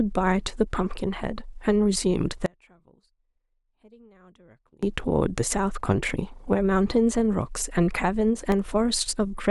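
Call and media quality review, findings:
Audio dropout to a faint residue, 2.46 to 4.83 s. Speech cuts out abruptly for about 2.4 s. Gap holds only faint sound, about 35 dB below normal level. Path stays live. Likely cause: upstream source lost while the downstream chain kept running.

Block of digital silence at 8.52 s. Short, sharp tick. Signal drops out for 0.67 ms, which fits a 32-sample block. Likely output buffer not filled in time. Hard edges at each end make the click. No fade.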